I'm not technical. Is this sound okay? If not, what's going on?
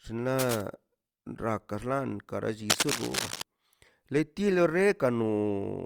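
No. Cable scratch noise appears from 0.38 to 0.61 s, and again louder, roughly matching the speech, from 2.70 to 3.43 s, likely from a worn cable being moved.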